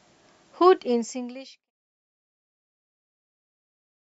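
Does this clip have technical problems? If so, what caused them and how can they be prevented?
No, the speech signal is technically sound, and the smooth fade-out that starts at about half a second and completes by 1.71 s is an ordinary edit.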